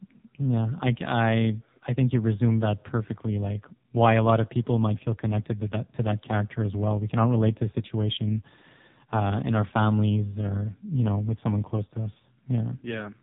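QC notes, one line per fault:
Throughout: AMR narrowband mobile codec. Speech sounds heavily buzzy, synthetic and muffled, with nothing above 3.8 kHz, because a sparse pulse-driven vocal-tract model rebuilds it at a starved rate, fitting about 5.9 kbps.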